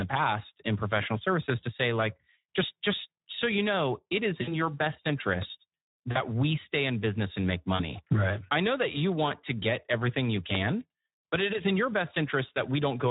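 Throughout, the speech sounds hoarse and grainy, with a noisy edge and little real detail in the upper band. That is Speex codec damage, with too few bits to model the excitation, which fits a setting around 11 kbps.

From 4.41 to 4.63 s, right after "you know it is", the sound smears into a stretched, fading tail and stays weak for a moment before recovering. At 6.11 to 6.20 s, just before "we stay in business", and again at 7.75 to 7.97 s, after "in business and make", shorter versions of the same stretched fill appear. These are VoIP packet loss concealed by the speech codec. Roughly 60 ms and then 40 ms twice of audio went missing, the decoder extrapolated from its last pitch and filter while fading the gain, and it took time to settle once packets returned.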